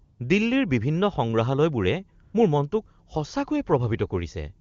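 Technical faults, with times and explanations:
0.03–0.19 s and 2.23–2.33 s, AMR comfort noise: the real background drops out and a smooth, steady hiss switches in for 160 ms and then 100 ms. The phone judged these moments silent, stopped sending speech frames, and the receiver synthesised noise from a coarse description of level and spectrum. The AMR wideband (HD Voice) codec carrying the speech sounds clean, consistent with a high-rate mode.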